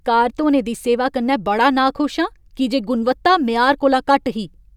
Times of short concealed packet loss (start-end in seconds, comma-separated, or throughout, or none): none